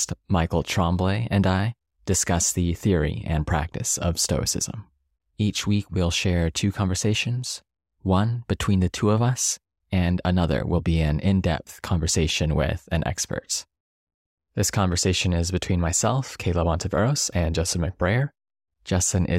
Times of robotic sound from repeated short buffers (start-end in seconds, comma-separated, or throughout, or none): none